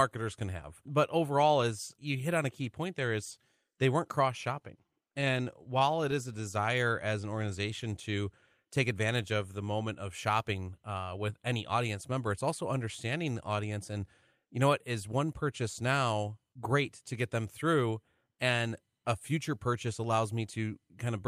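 Scattered short gaps run from 4.59 to 6.14 s in this speech. About ten tiny holes, none longer than roughly 15 ms, open where packets arrived late or not at all. The receiver bridged each one by extending the sound just before it, filling around 100 ms in total, or about 7% of that stretch. The result is a string of brief ticks and momentary smears, while the speech itself stays mostly clear between them.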